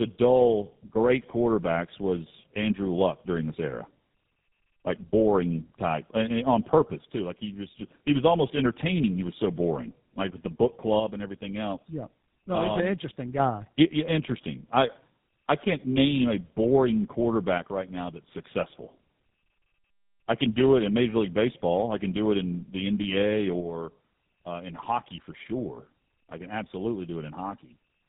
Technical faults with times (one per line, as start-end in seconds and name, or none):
0.00-28.09 tandem speech coding